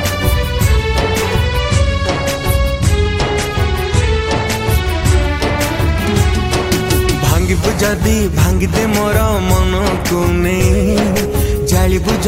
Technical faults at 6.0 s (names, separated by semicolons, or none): none